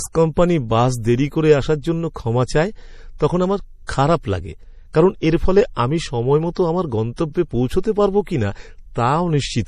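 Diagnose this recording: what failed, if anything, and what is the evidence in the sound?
Codec stage: the speech has nothing above 15 kHz and residual MP3 smearing throughout, likely low-bitrate audio saved at a high bitrate. A plain low-pass filter would leave no such smearing.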